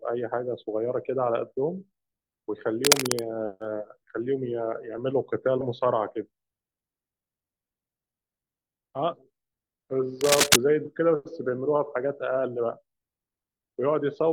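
At 2.85 to 3.25 s, a worn cable or connector was likely being moved, its contact resistance fluctuating rapidly. This cable scratch noise lays ragged, dense scratching over the speech, roughly 5 dB above it. At 5.57 to 5.61 s, the decoder skipped compressed frames, dropping around half a second of audio, which fits about ten 42.7 ms frames. The scratching returns from 10.17 to 10.58 s at a similar level. A second skip at 10.82 to 10.87 s loses about 150 ms.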